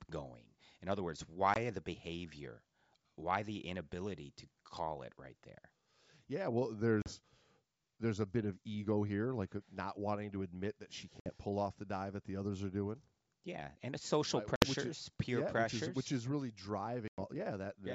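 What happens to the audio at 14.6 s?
At 14.56 to 14.65 s there's a clear dropout: packet loss on an ADPCM call, with about 60 ms, roughly three packets, going missing and filled with silence. The decoder's predictor and step size lose sync, so the speech comes back slightly distorted before settling.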